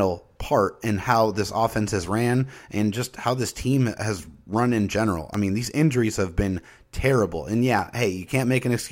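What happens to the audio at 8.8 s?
Nothing goes wrong at 8.8 s; the speech carries on intact through that moment.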